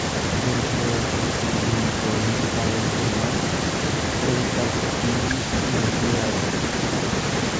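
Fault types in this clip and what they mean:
Nothing stood out on listening; the speech has been through a call's microphone processing, which trims the lowest bass and leaves nothing above 8 kHz, as that processing is meant to.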